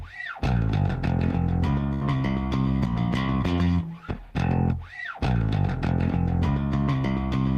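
At 1.93 s the sound briefly freezes into a held, fading continuation lasting about 73 ms, then jumps ahead at 2.03 s with roughly 80 ms of audio gone. This is a burst of packet loss: consecutive packets never arrived, so the receiver stretched and faded the last sound before resuming.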